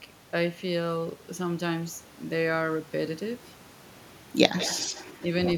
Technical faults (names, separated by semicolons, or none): echo leak